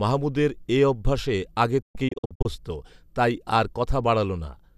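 From 1.82 to 2.46 s, after "মাহমুদের এঅভ্যাসে আগে", a digital broadcast dropout leaves clean silent holes up to 120 ms, not analogue hiss.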